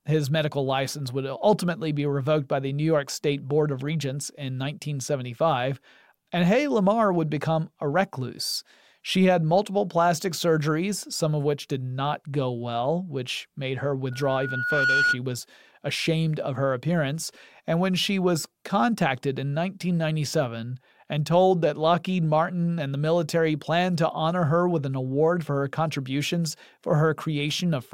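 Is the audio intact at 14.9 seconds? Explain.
No. At 14.9 seconds a loudspeaker feedback squeal is sounding, spanning 14.11 to 15.19 s, from just after "well which made her" to just before "was ashamed of her". A microphone is catching its own loudspeaker, and at 1.4 kHz the loop gain tops one, so that frequency feeds itself. Unlike a steady whine or interference tone, it swells over roughly three-quarters of a second before peaking about 5 dB above the speech.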